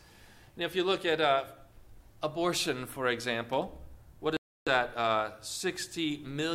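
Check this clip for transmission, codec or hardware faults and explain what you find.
One transmission fault is present: a dropout from 4.37 s to 4.68 s. The sound cuts abruptly to silence for about 0.3 s, then resumes. The likely cause is a Bluetooth stall. Radio interference delays packets on the wireless link, the receiving headphones exhaust their playback buffer, and output halts until retransmitted packets arrive and refill it. What the listener hears is a hard gap in the sound rather than distortion or a gradual fade.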